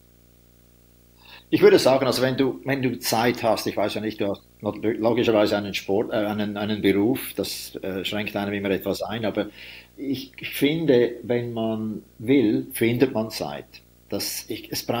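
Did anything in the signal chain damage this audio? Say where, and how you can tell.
Yes, in the analogue wiring: there's video or display buzz the whole way through the speech, a 59.94 Hz field-rate buzz with hash on top plus a 15.7 kHz line whine, sitting roughly 30 dB down. A screen or video cable is coupling into the audio lines.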